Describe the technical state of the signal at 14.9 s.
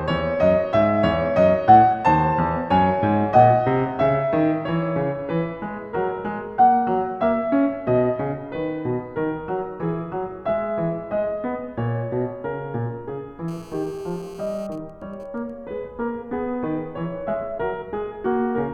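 GSM signalling bursts run from 14.72 to 15.5 s, covering the 14.9 s point in the music. A nearby 2G phone, apparently in a call with its user silent, sends short groups of radio bursts. The audio circuit rectifies them into even ticks with a longer buzz twice a second, at a repeat rate of 216.7 Hz. They sit well below the music, roughly 30 dB down.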